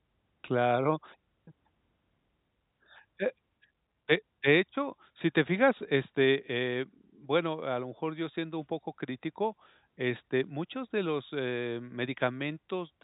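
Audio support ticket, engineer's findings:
No faults found in this clip.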